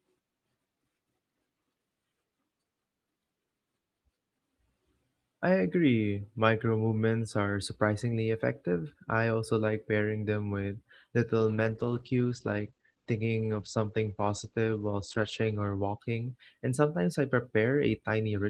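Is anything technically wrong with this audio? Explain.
Yes. From 11.38 to 16.44 s there is a call bitrate drop: the encoder's rate falls from 40 to 15 kbps, bottoming out for about 4 s, and its bandwidth shrinks from 20 kHz to 8 kHz, so the speech turns muffled and coarse, rough-edged and watery.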